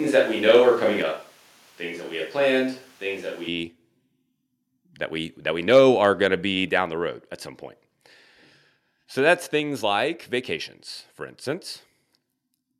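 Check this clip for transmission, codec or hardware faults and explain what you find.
The speech has three kinds of fault: a distant-microphone section at the start, two bursts of microphone overload, and two one-step cuts in input volume.

From the very beginning until 3.48 s, the sound is a switch to a distant microphone, most likely because the close microphone's signal was missing and a farther one was used. The speech sits about 5 dB lower, with thinner bass and a hollow, roomy colour, and background noise only about 30 dB below it. At 3.48 s the close, full tone returns abruptly. A plain gain change would alter the level but never this tone and room character.

Microphone overload occurs from 0.50 to 0.57 s and from 5.74 to 6.07 s. The input was likely driven past the converter's ceiling, by about 1 dB and then about 4 dB. The tops of the waveform are sliced flat, which gives the loudest moments a harsh, crackling edge. 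Only a small fraction of samples is affected, so the grit comes only on the peaks. That sets it apart from steady distortion or codec roughness, which would colour quieter passages too.

The microphone volume is stepped down at 1.02 s and again at 6.69 s, each a single drop of 4 dB. Each follows shortly after one of the overloads, as call software likely reacting to the clipping by lowering the device's input gain in one step. Speech and background fall together and the tone stays the same. That distinguishes it from the distant-microphone switch, where the timbre and room sound also change.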